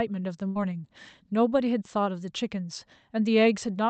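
Speech with a burst of packet loss from 0.47 to 0.57 s: about 78 ms of concealment continues and fades the preceding sound, then the audio jumps ahead with roughly 80 ms missing. On a spectrogram, smeared, decaying harmonics end in a hard discontinuity, with content cut off near 8 kHz.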